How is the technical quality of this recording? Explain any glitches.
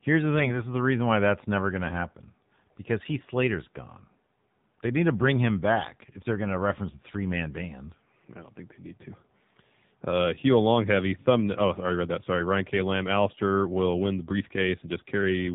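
The quality is poor: the speech is band-limited and synthetic throughout, with a brief stretch of corruption near the start.

Throughout, the voice sounds buzzy and thin with nothing above 4 kHz, the mark of the AMR narrowband mobile codec at a low mode that fits about 7.4 kbps.

From 0.35 to 0.64 s, just before "is the reason why", the voice turns hoarse and gargly. These are AMR bit errors: a few percent of bits flipped, scattering excitation pulses, consistent with about seven damaged 20 ms frames.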